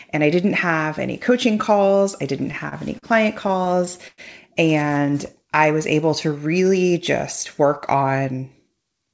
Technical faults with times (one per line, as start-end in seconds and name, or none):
2.39-3.06 repeated stalls (stutter)
3.48-4.21 repeated stalls (stutter)
7.60-8.77 jitter buffer speed-up